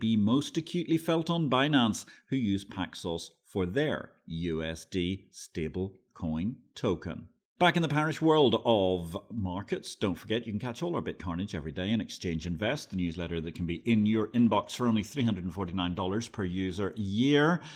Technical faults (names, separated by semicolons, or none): call bitrate drop